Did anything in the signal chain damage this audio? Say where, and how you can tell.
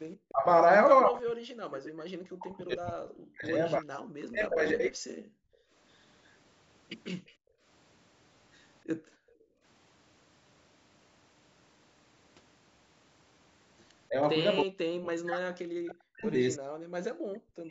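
Yes. The damage happens at the call-processing stage, in the echo canceller.

Speech suppressed in double talk appears at 0.31–0.46 s, 1.05–5.06 s, 14.09–14.18 s and from 14.63 s to the end. The talker's level collapses, by up to about 40 dB in the long stretches and by roughly 25 dB and 10 dB in the short ones. The likely cause is the far side talking at the same time. The canceller could not tell local speech from loudspeaker echo, so it turned everything down.

The background is gated by the echo canceller at 5.34–5.73 s, 7.32–7.62 s and 8.96–9.63 s. The room sound drops out, by about 40 dB in the first two gaps and about 33 dB in the third. It returns when the gate releases. Here the canceller treated loudspeaker playback as a reason to mute the microphone hard.

An echo leak appears at 7.27–7.32 s. A faint delayed copy of the sound arrives 310 ms late, at around 35 dB below the speech. 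It is a short scrap that sits just before the second gated gap. This is likely loudspeaker pickup that the canceller failed to remove before sending the signal back. The band-limiting to 8 kHz comes from the same call path.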